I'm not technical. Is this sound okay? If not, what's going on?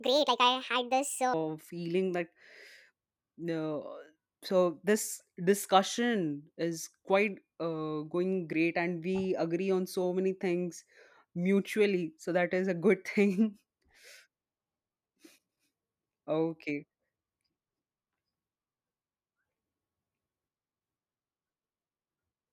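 No. Until 1.34 s, just before "feeling that", a wrong sample rate plays the audio 1.5 times too fast, making the speech hurried and about seven semitones higher.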